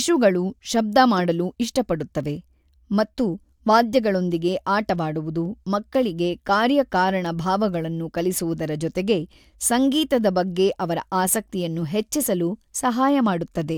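Nothing goes wrong anywhere in this speech recording, so there's no fault to point to at any moment.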